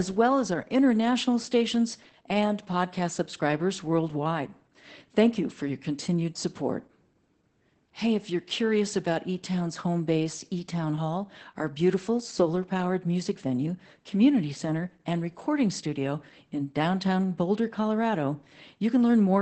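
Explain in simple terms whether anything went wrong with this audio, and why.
Throughout, the speech sounds muffled and slightly robotic, with nothing above about 8.6 kHz, because Opus voice compression squeezed it too hard.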